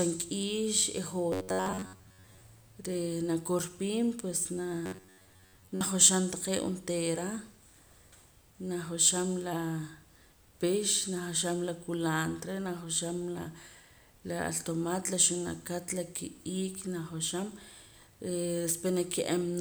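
At 1.32 to 2.41 s and again at 4.86 to 5.82 s, just before "taqee' onteera", the speech collapses into a stiff, metallic buzz pitched around 94 Hz. It still loosely follows the words. That's robotic sound from repeated short buffers, likely caused by audio arriving too slowly, so a slice of roughly 11 ms gets looped to cover the gaps. Most of the real audio in those stretches is skipped.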